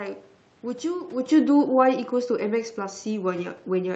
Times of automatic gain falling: 1.21-3.96

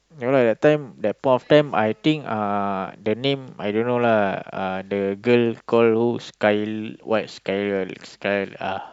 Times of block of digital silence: none

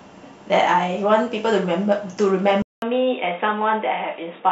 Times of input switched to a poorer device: 2.62-4.51

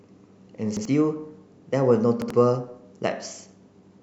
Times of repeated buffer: 0.77-0.85, 2.22-2.30

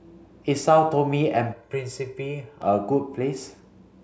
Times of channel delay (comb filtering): 1.53-2.62

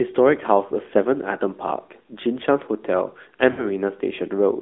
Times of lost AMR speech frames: 0.68-0.72, 3.52-3.68

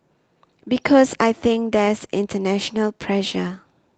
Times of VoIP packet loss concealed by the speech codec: none

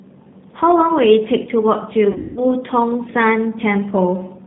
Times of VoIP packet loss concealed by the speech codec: 2.12-2.45

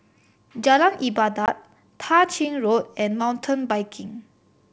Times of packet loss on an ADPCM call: 1.46-1.49

